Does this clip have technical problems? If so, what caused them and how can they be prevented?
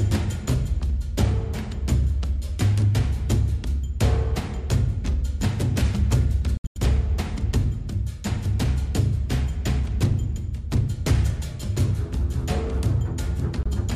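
Yes. The sound cuts out in several holes between 6.57 and 6.78 s, totalling about 160 ms (longest about 90 ms), and again from 13.63 to 13.67 s. This is likely Bluetooth dropout from late packets. On a spectrogram these gaps appear as blank vertical bands, and on a waveform as flat, sharp-edged gaps. To prevent it, keep the headphones near the source and away from interference.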